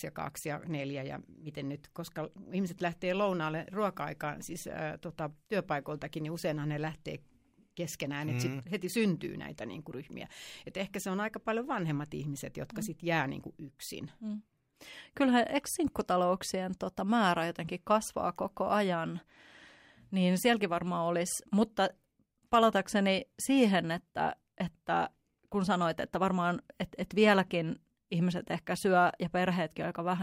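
Nothing goes wrong anywhere in this bit of speech, so there's no technical fault to point to at any moment.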